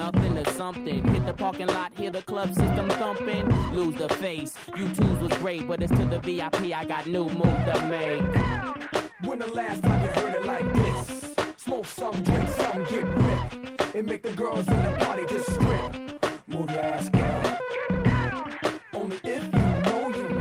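From 11.69 s to 14.11 s the sound turns coarse and watery, worst for about 1.1 s before clearing. This is a call bitrate drop: the bandwidth estimate fell and the encoder coded with far fewer bits, which fits a fall from 32 kbps to 14 kbps.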